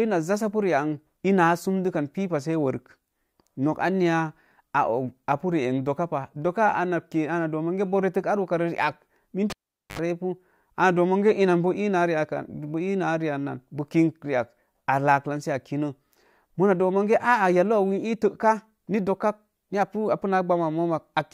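At 9.50 s the speech is cut by a cable pulled and plugged in. A sharp pop marks the connector breaking contact, and the signal drops to near silence for about 440 ms. As the plug goes back in, only its tip touches first, leaving the input open to pickup, so a 66 ms burst of 50 Hz mains buzz comes through. A second pop at full seating restores the audio by 9.99 s.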